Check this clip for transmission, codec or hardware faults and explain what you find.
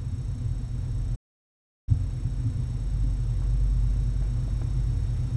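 One fault is present. A playback stall runs from 1.15 to 1.89 s: the sound halts into silence for about 0.72 s, likely because the player ran short of data. That is far longer than a brief dropout click.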